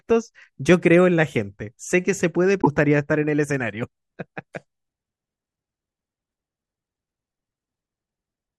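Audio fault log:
2.58–2.67 s, damaged data in a compressed stream: corrupted bytes made the decoder misread frames and hunt for sync, leaving a short glitch in the speech.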